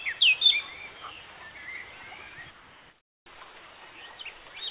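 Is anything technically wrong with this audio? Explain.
Yes. From 2.51 to 3.26 s the background is replaced by comfort noise, likely because the sender stopped transmitting in a quiet stretch and the receiver synthesised filler. The detailed ambience becomes a steady, featureless hiss about 3 dB quieter. On a spectrogram this appears as a smooth, uniform band, and on the waveform as a flat envelope.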